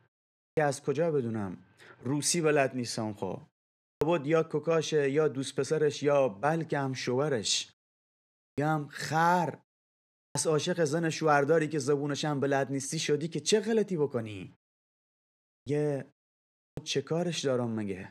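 Speech, with a clipped start after a pause at 0.46, 3.91, 8.47, 10.25, 15.56 and 16.67 s. Each time, about 0.1 s of onset vanishes as the output device wakes from silence.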